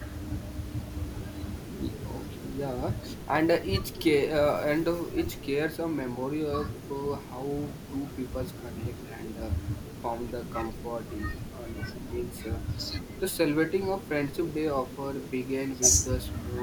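Nothing in the speech stood out as a technical fault on listening.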